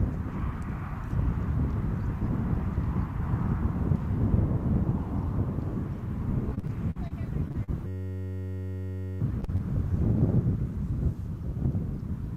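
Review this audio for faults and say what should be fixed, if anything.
Repeated packet loss (robotic sound) runs from 6.49 to 7.12 s: six gaps, the longest 47 ms, were each patched by extending the previous sound, so about 27% of the stretch is synthetic fill. Unlike an isolated dropout, the holes cluster closely. Prevention: use a larger jitter buffer and a more stable network path.

Short concealed packet loss occurs at 7.48, 7.52, 7.64, 9.41, 9.44 and 9.56 s, each 20 to 40 ms of missing audio filled by continuing the last sound. These are single brief smears rather than a sustained cluster. Prevention: add forward error correction or redundancy to the stream.

A system hang loop holds from 7.87 to 9.21 s: one 10.67 ms piece repeats 125 times, producing a steady 93.8 Hz buzz, which fits a 512-sample buffer. Its exact periodic repetition separates it from packet-loss concealment, which blends and decays. 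Prevention: fix the driver or system stall so the audio thread keeps refilling its buffer.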